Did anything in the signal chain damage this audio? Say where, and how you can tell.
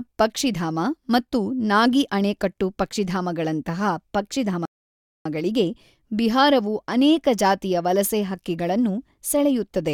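Yes, at playback. A rebuffering stall at 4.65 s cuts the speech to silence for 0.6 s. It resumes exactly where it stopped, so nothing is lost.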